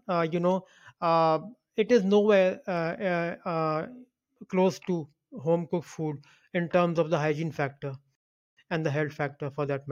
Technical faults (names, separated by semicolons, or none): rebuffering stall